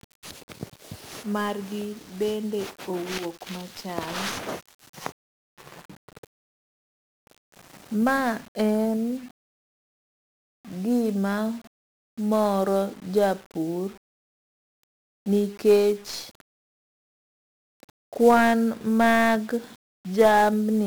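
A speech recording runs through 1-bit DFPWM compression from start to finish, and the damage is heavy. Each sample carries only a single up-or-down bit nudging an adaptive level, so the voice sits inside a dense, broadband fuzz with constant crackle, and the upper frequencies drown in hiss. The grain suggests a rate around 48 kbps. Unlike a perceptual codec's swirly, band-limited artefacts, this noise is steady, full-band and tied to the signal itself.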